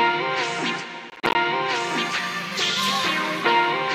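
From 1.10 to 1.35 s the sound breaks into a burst of processor overload crackle. The processor repeatedly misses its deadlines for buffers of around 10 ms, and some fifteen of them drop out as hard-edged silent gaps, heard as gritty tearing that stops once the load eases.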